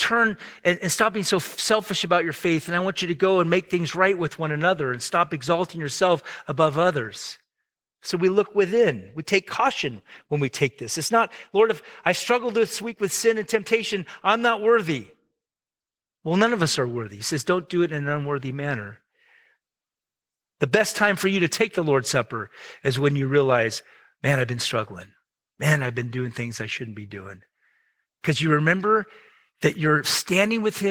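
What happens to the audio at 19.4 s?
At 19.4 s, as throughout the clip, the speech carries Opus voice compression in hybrid mode, with SILK below 8 kHz and CELT above. The sparse excitation coding, consistent with about 16 kbps, leaves the full-band speech plainly hoarse and slightly robotic.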